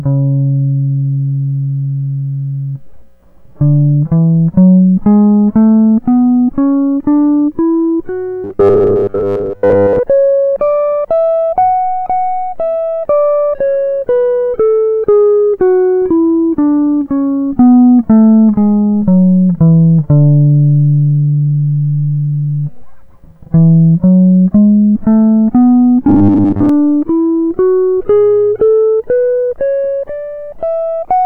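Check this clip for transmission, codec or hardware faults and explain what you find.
Two stretches of robotic sound from repeated short buffers affect this music, at 8.44 to 9.99 s and 26.08 to 26.69 s. Audio likely arrived too late, so roughly 10 ms chunks were looped over most of each stretch, locking the music into a rigid, metallic 100 Hz buzz.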